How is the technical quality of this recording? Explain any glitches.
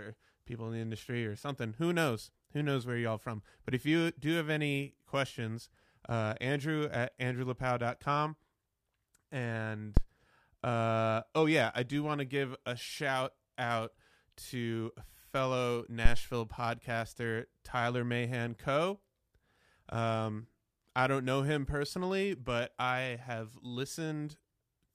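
The recording has two phantom power thumps, from 9.97 to 10.04 s just before "uh oh yeah I", and from 16.05 to 16.28 s. Each is a deep thump peaking at about -10 dBFS and decaying within 15 ms and 51 ms. A supply switching on or off on the live input sends a step through the coupling capacitors. Unlike a plosive, the thump does not follow the speech.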